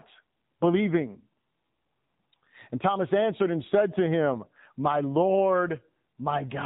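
AMR narrowband mobile codec damage runs throughout: the 8 kHz sampling removes everything above 4 kHz, and the sparse pulse excitation gives the speech a buzzy, synthetic edge fitting about 7.4 kbps.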